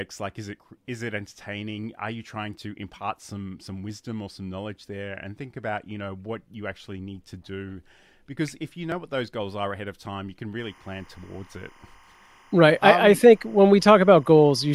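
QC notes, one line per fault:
10.59–14.75 s, timecode bleed: a steady chirping warble sits behind the speech, around 35 dB below it, from a 25 fps linear timecode leaking in from an adjacent track or cable, its square wave flipping between tones near 1 kHz and 2 kHz.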